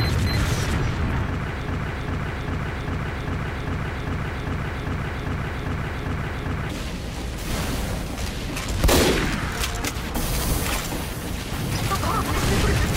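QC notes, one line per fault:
1.67–6.70 s, broken-record loop: a fragment of about 0.40 s repeats exactly, back to back, 13 times, so the sound stutters in an identical cycle for about five seconds before normal playback resumes. The likely cause is a stall in the player, encoder or stream that kept resending the last block it held. Whatever audio belonged in that stretch never arrives and is lost, replaced entirely by the repeating fragment.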